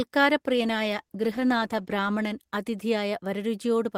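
Speech that turns rough, watery and duller from 0.5 s to 2.91 s, worst for about 1.6 s, then clears. This is a call bitrate drop: the encoder was given far fewer bits, consistent with falling from about 32 to 14 kbps, so it coded coarsely and lost high frequencies.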